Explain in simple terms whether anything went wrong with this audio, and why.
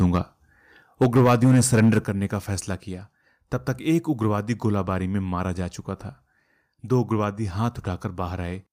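Microphone overload shows up right at the start, up to 0.17 s, and more strongly from 1.01 to 1.99 s. The loudest moments sound distorted, likely because the input was set too high and their tops got cut off.

Microphone volume stepped down twice, at 1.04 s and then by a bigger step at 2.04 s. The level suddenly drops each time, likely the call software turning the mic down after hearing it overload.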